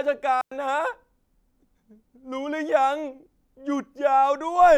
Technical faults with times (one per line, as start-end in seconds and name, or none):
0.41-0.51 digital wireless dropout